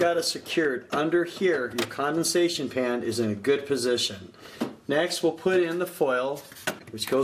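At 6.79 s, a corrupt frame decoded. The fault lasts until 6.83 s, about 48 ms, which fits a single damaged frame. Some bits inside that compressed frame were flipped, and the decoder played it anyway. Misread codes or wrong gains pushed energy to the wrong frequencies for the length of the frame. The result is a brief out-of-place event in the audio, such as a chirp, squeak, blip or burst of noise. The error peaks at about -35 dBFS.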